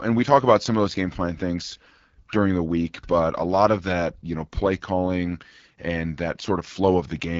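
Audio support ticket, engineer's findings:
AMR wideband (HD Voice) codec, whole clip, 0 to 7.4 s. Speech rough and raspy throughout, plainly audible coding damage; roughness points to one of the two lowest AMR-WB modes, likely the 8.85 kbit/s rate. Nothing above 7.5 kHz; 6.4 to 7 kHz band is filled with shaped noise, not true detail. Unlike narrowband AMR, which stops near 3.4 kHz, sibilance stays present. Unlike a plain low-pass, the rasp comes from the coarse pulse-driven vocal tract model.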